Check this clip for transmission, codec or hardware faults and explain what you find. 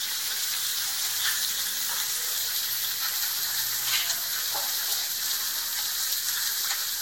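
There is one codec fault, present from start to finish: generation loss. The sound was likely passed through a lossy codec many times, around seven, at a rate consistent with roughly 60 kbit/s Vorbis. Each re-encode quantised afresh, stacking noise, so the sounds come out swirly and hollow, transients smear, and nothing remains above 16.6 kHz.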